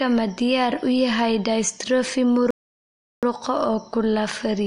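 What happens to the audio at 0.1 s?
At 0.1 s, as all the way through, the speech sounds watery, likely MP3 compression at a low bitrate around 48 kbps dropping weak frequency lines.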